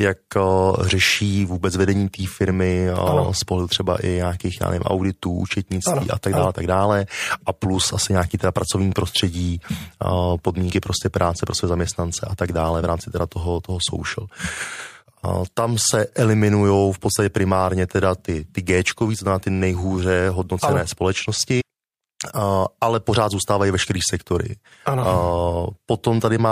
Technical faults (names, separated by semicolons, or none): compressed frames skipped